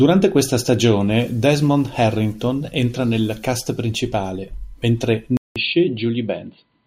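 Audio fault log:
5.37–6.87 s, input switched to a poorer device: after "nel cast principale mentre" comes a 0.19 s gap, then the speech returns about 5 dB quieter and duller, with nothing above 4.6 kHz and faint new background noise. This is likely a switch to a narrower-band microphone.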